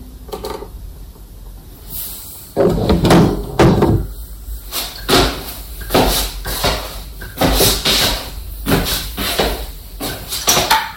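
From 2.59 to 3.96 s and again from 10.48 to 10.76 s, an overloaded stage cuts the peaks flat (hard clipping, about 26 and 23 dB over), giving harsh fuzz.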